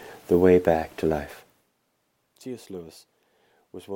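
No technical faults can be heard in this audio, and the level holds steady with no fader-like ramps up or down.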